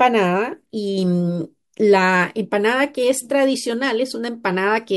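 Nothing goes wrong anywhere in this speech clip, so there's no fault to point to at any moment.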